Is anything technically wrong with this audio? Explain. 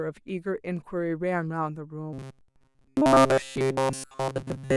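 Yes. From 2.13 s to the end at 4.77 s the speech turns into a rigid metallic buzz at 133 Hz: robotic sound from repeated short buffers, likely caused by audio arriving too seldom. A chunk of roughly 7.5 ms keeps repeating for most of that stretch.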